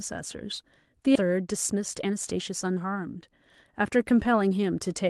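At 1.15 to 1.17 s the speech makes a skip ahead. Roughly a second of audio never plays. Playback jumps straight to later material with no filler in between. The two sides join almost directly, so the speech lurches forward. Part of what was said is simply gone. A burst of delayed packets arriving together would produce this, with the buffer dropping a stretch to catch up.

From 1.21 to 3.17 s a jitter buffer speed-up follows. The receiver still holds too much audio. It trims it by cutting many short, pitch-period-sized pieces. The speech runs at about 115 percent speed, and the pitch stays put. Around 0.3 s is removed, and the delivery sounds hurried. A milder pass runs from 3.82 to 4.77 s at about 108 percent. It removes roughly 0.1 s, and the rush there is subtler.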